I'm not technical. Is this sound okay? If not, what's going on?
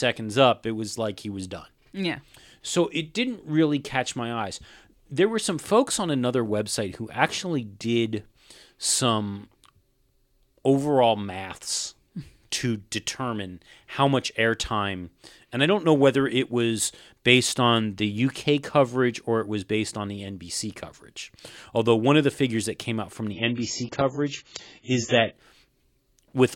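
No. Just after "that came out from", from 23.3 to 25.3 s, the speech suddenly turns dull and fizzy, then snaps back. This is an adaptive stream at a lower bitrate: the connection slowed, so playback briefly switched to a lower-quality version without any gap.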